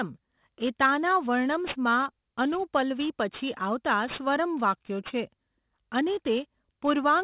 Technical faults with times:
0.00-7.24 aliasing

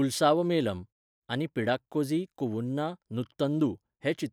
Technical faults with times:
none

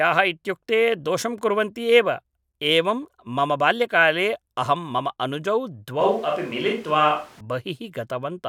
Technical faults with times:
6.01-7.40 switch to a distant microphone

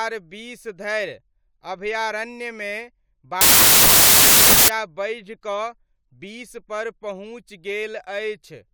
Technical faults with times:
3.41-4.68 wrong sample width

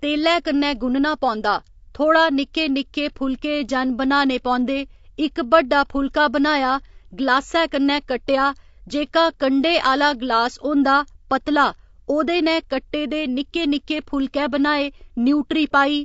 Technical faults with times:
0.00-16.04 low-delay AAC compression

